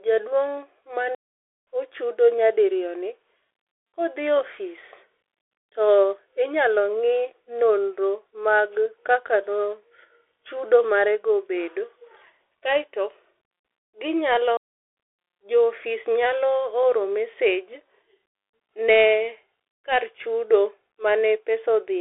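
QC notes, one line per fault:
Throughout: Bluetooth CVSD headset codec. The audio is carried at 64 kbps by one-bit up/down steps with an adapting step size. On a spectrogram the energy is trapped between about 250 Hz and 3.5 kHz, with nothing above 3.8 kHz. S sounds are scratchy, loud peaks are slope-limited, and a granular hiss fills the band.
1.15–1.67 s and 14.57–14.97 s: playback stall. The sound cuts out for 0.52 s and then 0.40 s before carrying on, most likely because the player ran dry or its thread was blocked. Both gaps show as flat lines in the waveform and blank vertical strips on a spectrogram.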